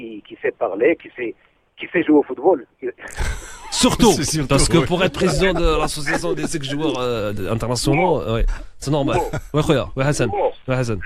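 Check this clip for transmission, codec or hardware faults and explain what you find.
Nothing here stands out as a fault; the audio runs along steadily with no dropouts, glitches or distortion to point to.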